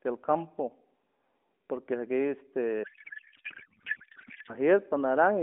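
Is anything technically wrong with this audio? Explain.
Yes. From 2.84 s to 4.55 s there is a codec payload misread. For about 1.7 seconds the speech gives way to garbled noise and warble that barely follows it. The decoder is taking valid-looking AMR frames and reading the bits out of the wrong fields, which fits octet-aligned packing being parsed as bandwidth-efficient. Packet loss would cause short gaps or smeared repeats. This is instead a continuous stretch of nonsense that stops abruptly. Low-bitrate buzz would colour the whole clip, but the speech here returns to normal right after 4.55 s. Around the fault, the AMR narrowband sound is confined to roughly 200 Hz to 3.5 kHz with only light codec colouring, which points to the 12.2 kbps mode.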